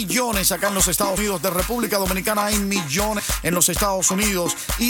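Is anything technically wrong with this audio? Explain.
Yes. Compressed frames are skipped at 1.16 s and 3.18 s. Each time about seven 23.2 ms frames never reach playback, so about 150 ms of audio vanishes and the sound jumps forward.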